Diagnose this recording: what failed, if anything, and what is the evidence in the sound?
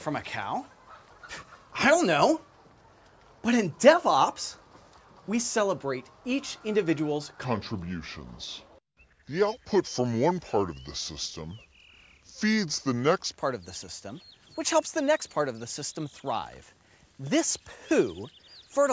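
A wrong sample rate at playback, consistent with 22 kHz material clocked out at 16 kHz, slows the sound from 7.45 to 13.32 s to 0.73x speed and drops pitch about 5.5 semitones.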